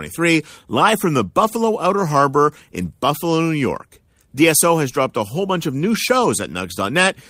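Packets were lost in this speech clip, and the decoder rebuilt them from the low-bitrate copies carried in the following packets, so this is lost-packet rebuilding from error correction. There's no gap, but three short stretches turn rougher and noisier: 1.43 to 1.49 s, just after "live from the"; 2.81 to 2.87 s, each about 40 ms and consistent with two lost 20 ms packets; and 5.93 to 5.95 s, just after "whole bunch of new," about 20 ms long, matching a single packet.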